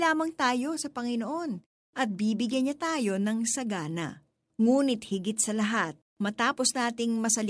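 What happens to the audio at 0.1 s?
Nothing goes wrong at 0.1 s; the speech there is intact, with no dropout, click or distortion.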